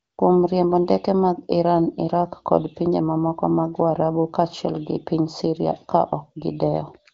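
No technical faults can be heard anywhere in this speech.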